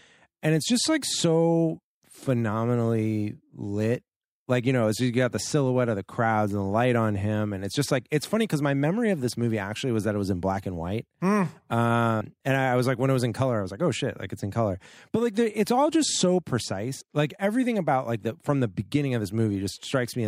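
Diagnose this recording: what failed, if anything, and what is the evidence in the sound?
Codec stage: compressed frames skipped at 12.21 s after "black and white mm" (about 150 ms lost) and at 17.01 s before "like everything about like" (about 70 ms). Whole 32 ms frames drop out.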